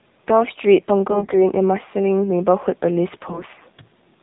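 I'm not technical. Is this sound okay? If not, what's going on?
No. The whole clip has been through the AMR narrowband mobile codec, the system older phones use for calls. It discards everything above 4 kHz and rebuilds the voice from a simple model. That makes it sound thin, muffled and buzzy throughout.

There are also AMR bit errors, from about 1.10 to 1.44 seconds and from 3.14 to 3.70 seconds. A weak signal corrupted some of the data. The voice keeps roughly its pitch and loudness there but turns hoarse, scratchy and gargly.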